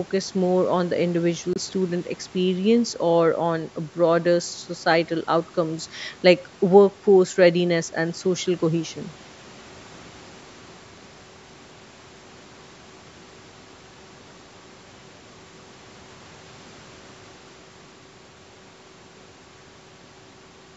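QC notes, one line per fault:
1.53–1.58 s, Bluetooth dropout: a packet likely failed to reach the headphones in time and was discarded. The speech drops to silence for about 23 ms, then resumes further along, as though it had kept playing. The gap fits a single lost packet.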